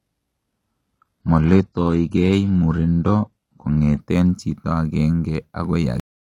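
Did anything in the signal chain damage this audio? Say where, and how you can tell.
Yes. Adaptive stream starting at a low bitrate, at the network and codec stage. Until 4.0 s the speech is smeared, with synthetic treble and nothing above 12.3 kHz. Quality then jumps with no gap. This fits HE-AAC near 16 kbit/s stepping up to AAC-LC near 96 kbit/s.

Cut-off end, at the playback buffer stage. At 6.00 s the speech stops mid-sound and drops to digital silence with no decay. The final buffers were never played out.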